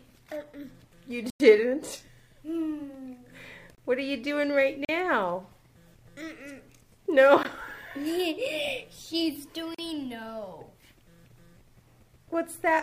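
The first couple of seconds give it away as an adaptive stream starting at a low bitrate. Up to about 2.10 s the top end is thin and a bit synthetic, with nothing above about 14.9 kHz and heavier codec smearing. The sound points to a low-rate HE-AAC start around 20 kbit/s, which the player uses to get going fast. Once it has sized up the connection it switches to what sounds like AAC-LC around 96 kbit/s. The treble comes back all at once, with no gap at the switch. On top of that there are five blocks of digital silence, where a run of samples drops straight to silence and back with no fade. The longest is 1.30 to 1.40 s, a 99 ms hole. Then there's 3.75 to 3.78 s (29 ms), 4.85 to 4.89 s (40 ms), a gap at 7.43 s (17 ms) and 9.75 to 9.79 s (40 ms). The short ones land as short holes and the long one as an actual dropout. That likely points to the output buffer not getting filled in time.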